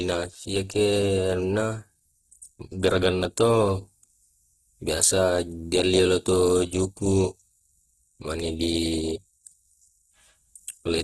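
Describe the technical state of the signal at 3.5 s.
At 3.5 s the speech has the grainy, rough texture of Opus compression, likely a starved low-bitrate encode that fills thin bands with noise. It runs throughout, with nothing above 12.2 kHz.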